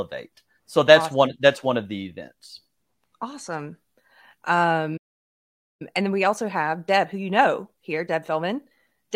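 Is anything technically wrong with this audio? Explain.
Yes, the playback stalls, then hurries to catch up.

Playback stall, 4.97 to 5.82 s: the speech cuts to silence for about 0.83 s, likely because the player's buffer ran dry or its thread was blocked.

Time-compressed catch-up, 5.82 to 8.82 s: the player trims its backlog by splicing out short slices, so speech runs 1.25 times fast at normal pitch.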